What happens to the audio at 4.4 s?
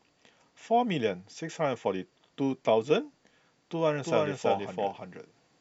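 At 4.4 s the speech is heard twice: a doubled audio track starts abruptly at 4.04 s and runs to the end. A second copy trails by roughly a third of a second at about the same loudness, likely because the audio is captured again through a slower path. Unlike an echo or reverb, it is one clean, full-band repeat with no decay or room colour.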